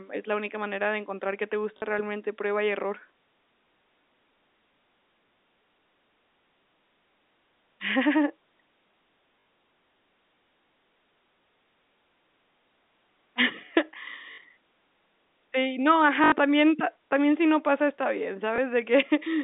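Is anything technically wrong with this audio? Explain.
Yes, there's packet loss with the last packet repeated, in five spots: 1.78–1.82 s (40 ms, between "de encontrar qué te" and "realmente prueba y"), 9.40–9.46 s (60 ms), 14.32–14.38 s (60 ms), 16.24–16.32 s (80 ms, just before "también pa también si") and 18.56–18.58 s (20 ms, right after "no pasa está bien"). Packets went missing and the receiver kept replaying the last good one. The loop seldom lines up with the pitch, and the longer runs buzz at about 50 Hz, which points to 20 ms packets. You hear the runs as brief robotic stutters, and the single 20 ms repeat as a small blip. The speech itself sits in a telephone band, roughly 200 Hz to 3.7 kHz, from the G.711 A-law link.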